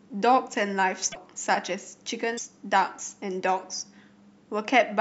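Cut MP3 frames, likely a broken MP3 bit reservoir, leave the next frames decoding stray bytes, so the speech skips ahead with brief garbled breaks at 1.11–1.16 s and 2.37–2.40 s.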